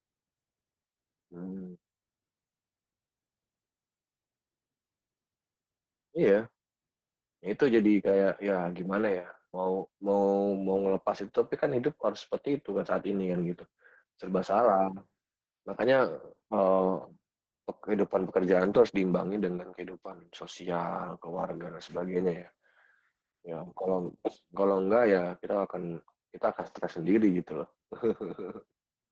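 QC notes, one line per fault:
throughout, Opus voice compression: the codec is running its SILK speech coder near 10 kbps, judging by the damage, capping the band at 8 kHz and quantising the excitation very coarsely, so the speech sounds muffled, hoarse and faintly robotic, with heavy codec damage.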